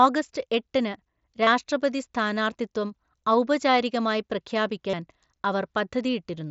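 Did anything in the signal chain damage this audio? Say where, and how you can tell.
Yes, there are two short concealed Bluetooth headset packet loss events on the wireless link between headset and phone, at 1.44 to 1.47 s and 4.89 to 4.94 s. Each sounds like a brief buzzy hold in the speech at full level, then a slight warble as real audio returns. The gaps run about 22.5 ms and 37.5 ms, which fits three and five lost mSBC frames, and the receiver papered over them by repeating recent waveform.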